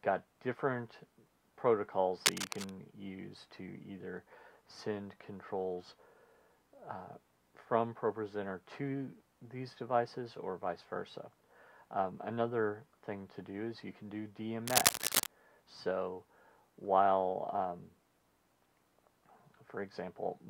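From 2.25 to 2.71 s, and again from 14.67 to 15.27 s, a burst of cable scratch noise rides over the audio, roughly level with it the first time and somewhat louder the second. A worn cable, plug or control was likely being moved, making its contact resistance jump about rapidly. Unlike isolated clicks or steady crackle, each burst is a dense, uneven rustling scrape.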